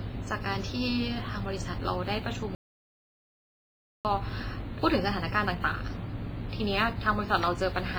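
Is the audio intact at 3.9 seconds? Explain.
No. At 3.9 s the sound is in the middle of a playback stall that runs from 2.55 s to 4.05 s, about 1.5 s of silence. The output simply stops mid-flow, most likely because the player ran short of data or its thread was held up, and then picks up again. Unlike a packet dropout, which leaves a gap of a few tens of milliseconds, this silence is long and clean, with no clicks or smeared fragments inside it.

Around that gap, and throughout the speech, the audio also carries WMA compression damage, likely from an encode at a low bitrate, roughly 24 kbps. The long transform blocks spread quantisation noise over tens of milliseconds, so the speech rings and sounds washy, and a hiss swells and fades with the speech level. That breathing hiss and ringing distinguish it from steady background noise, which stays at a constant level between phrases.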